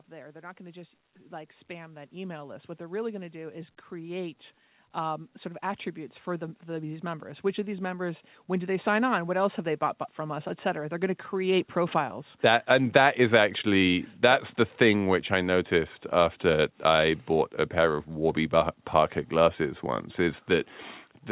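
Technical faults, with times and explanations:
0.06–4.42 s, 4.94–9.65 s, 10.16–12.03 s, automatic gain rising: gain control judged the input too quiet and lifted speech and background together by about 9, 8 and 4 dB, so the waveform envelope and spectrogram brightness climb steadily across each stretch, all within a call-codec band that ends at 4 kHz.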